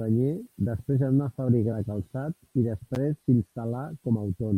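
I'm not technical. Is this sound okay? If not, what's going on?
No. From 0.97 s to the end there is channel delay (comb filtering): one side of the stereo audio runs about one sample late, and mixing the two cancels some of the very highest treble, near 20 kHz, giving a loss of top-end crispness in the speech.

At 1.71 s, compressed frames are skipped: about two chunks of 26.1 ms each, roughly 50 ms of speech, never play, so the audio jumps ahead.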